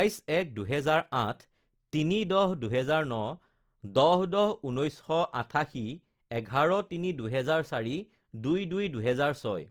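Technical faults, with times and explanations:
Throughout, Opus compression: the speech sounds rough and grainy, and steady sounds turn noisy, yet the band stays full up to about 20.4 kHz with few gaps. The likely cause is Opus in music mode filling starved bands with folded or noise content, as at roughly 24 kbps.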